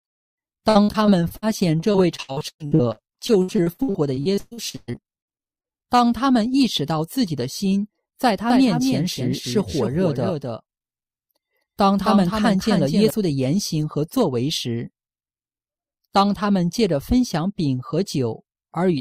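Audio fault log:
0.69–1.44 s and 1.80–5.97 s, repeated packet loss (robotic sound): 6 then 37 gaps, up to 120 ms, are patched by repeating the last sound. This leaves choppy, robotic audio.
8.50–13.10 s, doubled audio track: A full-band copy trails about 300 ms behind at about 5 dB lower, with abrupt edges. It likely comes from a second, slower capture or an out-of-step edit.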